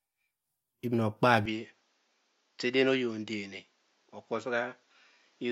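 At 1.46 s the recording system most likely switched its input to a poorer device, and the change holds to the end of the clip. The new path cuts everything above 7.6 kHz, so the speech loses its top-end air and turns duller. The switch happens with no gap, but the level drops by roughly 5 dB and a faint new background noise appears, sitting well below the speech.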